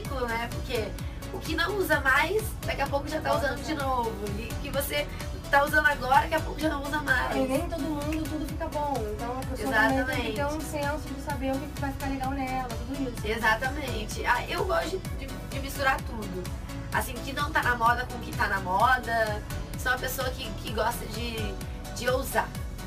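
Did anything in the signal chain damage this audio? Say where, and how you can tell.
Yes: sample clock jitter throughout, at the converter. A few microseconds of timing error leaves hiss about 25 dB below the sound, worsening on loud, bright passages and vanishing in silence.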